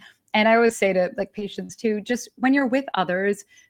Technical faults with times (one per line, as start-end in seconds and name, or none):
0.67-2.95 scattered short gaps